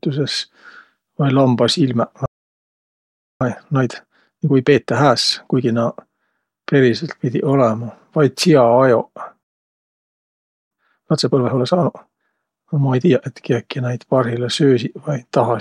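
A speech clip with two playback stalls: the audio cuts to silence mid-flow from 2.26 to 3.41 s and again from 9.43 to 10.71 s, gaps of roughly 1.15 and 1.28 s, most likely because the player ran dry of data or its thread got blocked. Each stall is followed by time-compressed catch-up, with the speech running about 1.5 times fast at normal pitch from 3.41 to 5.69 s and from 10.71 to 13.27 s. Small chunks are being cut and cross-faded to shed the backlog, which gives that hurried feel until things settle, the second time just before "et kiäki näid parhilla".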